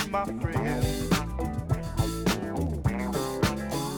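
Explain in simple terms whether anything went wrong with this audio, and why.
Nothing went wrong with this audio, so there is nothing here that needs explaining.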